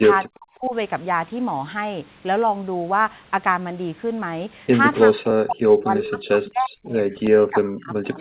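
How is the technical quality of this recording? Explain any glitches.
The speech has dropouts, with the voice being pushed down hard three times, and it's telephone-band throughout. Nothing comes through above 4 kHz, which fits a G.711 A-law call path at 64 kbps.

The dropouts run from 0.22 to 0.74 s, from 5.08 to 7.05 s, and from 7.21 s to the end. The voice dips by up to about 40 dB. This is likely speech suppressed in double talk: the far end was talking at the same time, and the echo canceller couldn't tell the local talker from loudspeaker echo, so it clamped down on both.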